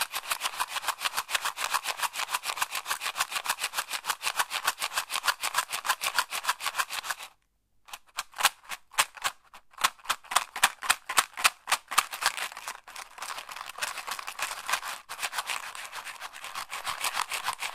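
A gritty hiss rides on these sounds from start to finish, swelling on loud, bright passages and vanishing in silence. This is sample clock jitter: the converter's clock wanders by several microseconds, so each sample lands slightly early or late. Steep, fast-moving parts of the waveform turn those timing slips into the largest level errors, so the roughness follows the treble and loudness, sitting around 15 dB below the signal itself.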